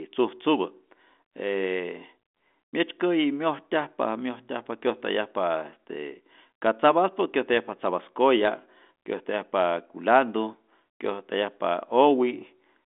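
No technical faults can be heard anywhere in the recording. The speech comes over a G.726 ADPCM telephone path at 40 kbit/s, limited to roughly 250 Hz to 3.5 kHz with nothing above 3.8 kHz, and its coding noise is at most faint.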